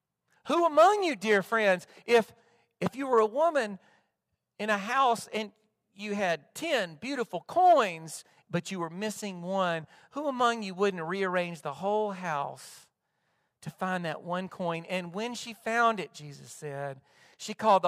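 Speech recording, and no technical faults can be heard.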